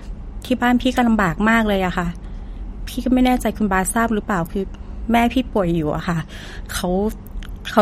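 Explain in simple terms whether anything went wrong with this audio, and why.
Throughout the speech, the top end stops sharply near 16.1 kHz and quieter detail swirls wetly. That watery flutter, not just dullness, marks likely MP3 compression.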